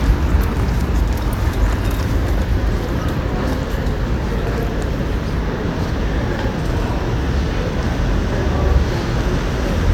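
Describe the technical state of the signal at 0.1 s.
At 0.1 s the signal is intact, with no audible fault at that point.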